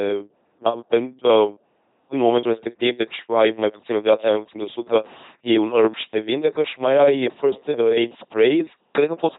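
A speech clip, coded throughout with the LPC-10 vocoder. The voice is rebuilt from a simple filter of up to ten poles. That filter is driven by either a pulse train or noise, never a blend. So the speech sounds buzzing and mechanical, like a robot. The damage is heavy. Where voicing is misjudged, buzz and hiss swap in. Nothing remains above about 3.9 kHz. The sound fits a 2.4 kbit/s stream.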